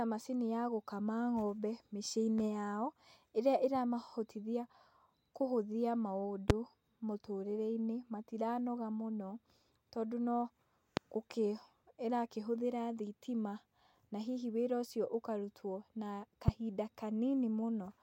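A loud pop occurs three times: at 6.50–6.53 s, at 10.97–11.00 s just after "tondũ no", and at 16.48–16.51 s. Each is a single sharp pop lasting under 30 ms, about 25 dB above the speech for the first two and about 20 dB for the last. The speech carries on beneath each one. The likely cause is a sudden voltage step or pulse, from a switch, static or a driver glitch, entering the signal chain.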